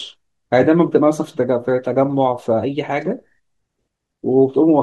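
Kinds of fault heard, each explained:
No technical faults can be heard in this speech recording, and its signal shows nothing that needs explaining as a defect.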